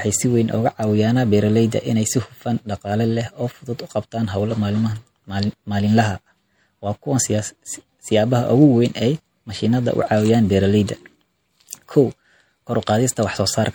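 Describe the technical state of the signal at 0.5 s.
At 0.5 s the speech already carries the MP3 compression damage that runs through the whole clip, plainly audible and likely from an encode around 64 kbps. Weak frequency components drop in and out between frames, giving a watery, swirly texture and softened attacks.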